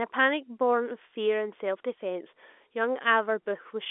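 No technical faults can be heard in this speech, which carries the narrow telephone band of roughly 250 Hz to 3.5 kHz expected of normal G.711 A-law coding, consistent with a 64 kbps line.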